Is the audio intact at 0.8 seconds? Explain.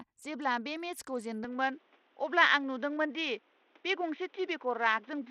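No. Bluetooth SBC compression is at 0.8 s and throughout the speech, likely the cause of its treble dropping out and flickering. The gritty, aliased sound points to a small bit pool, around 80 kbps, that starves the top sub-bands and coarsely quantises the rest.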